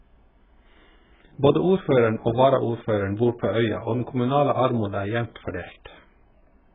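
Throughout, the speech sounds dull and smeared, with nothing above 3.8 kHz and fizzy, warbling sibilants. The likely cause is heavy AAC compression at a very low bitrate.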